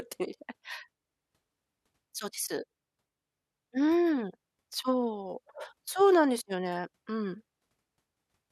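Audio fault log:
No faults are heard in this speech clip.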